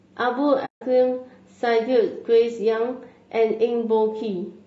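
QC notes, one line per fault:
Throughout: low-delay AAC compression. The speech has a rough, grainy texture, with noise filling the gaps between the pitch harmonics and a thin, somewhat artificial top end. The likely cause is AAC-ELD, the low-delay AAC used for video calls. Its short frames resolve harmonics poorly and cost extra bits, so at a rate that sounds like roughly 32 kbps the codec cannot keep the voice clean. The damage is plainly audible across the whole clip.
0.65–0.82 s: AAC frame loss with muting. The audio fades out and back in, leaving a soft-edged hole of about 160 ms, which fits a run of around eight lost frames. The decoder replaced the missing frames' spectrum with silence, and the overlapping transform windows on either side turn the edges into short fades instead of abrupt cuts. The result is a soft-edged silent dropout, not a sharp break.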